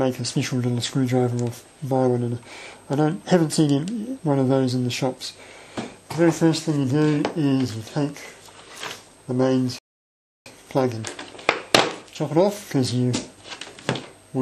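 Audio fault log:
9.78–10.46 s, playback stall: the sound halts mid-flow and the output sits silent for about 0.67 s, likely because the player ran short of data or its thread was blocked. The gap is a single clean silence, far longer than a brief dropout click.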